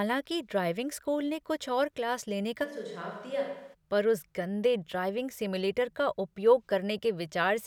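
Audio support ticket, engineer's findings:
Switch to a distant microphone, 2.66 to 3.72 s, after "और क्लास लेने का". Speech turns roomy and hollow. Bass thins. Level drops about 5 dB. Room noise rises to around 30 dB below the speech. Likely the close mic dropped out and a farther pickup took over. Returns to the close sound abruptly at "पर उस गंदे ड्राइविंग".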